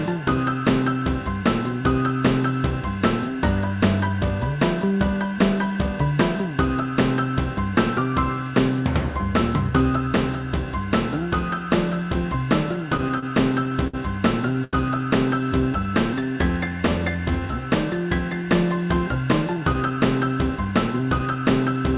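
From 12.76 to 13.95 s, repeated stalls (stutter): the jitter buffer ran dry eight times, and the receiver held the last sound across about 146 ms in total, with the longest gap 60 ms. The audio halts and restarts repeatedly rather than catching once.

At 14.64 to 14.75 s there is a single short stall from a late packet. One sound is stretched for 84 ms until the packet arrives. It is an isolated hold with a faint dip, not a run of catches.

From 15.41 to 17.62 s, jitter buffer slow-down: the receiver repeated pitch periods to add 228 ms, so playback runs at 90% speed. The pitch holds steady, unlike a tape slowing, and the sounds are drawn out.

From 19.45 s to the end at 22 s, jitter buffer speed-up: roughly a fifth of a second is trimmed out in tiny pieces. The audio runs at 108% and sounds hurried, with pitch unchanged.

Throughout, nothing is heard above 4 kHz, which fits a narrowband G.711 call codec.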